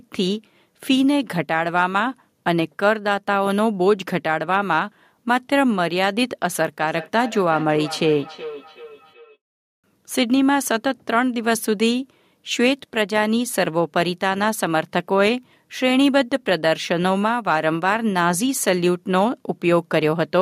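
A speech recording with a feedback echo between two devices from 6.79 to 9.38 s: a second device on the same call replays this microphone's signal, which is picked up again and missed by the local echo canceller, so speech returns at intervals of roughly 400 ms, peaking about 15 dB below the voice.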